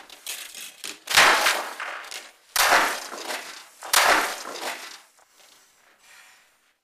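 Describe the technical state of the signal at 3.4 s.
At 3.4 s the signal is intact, with no technical fault audible at that moment.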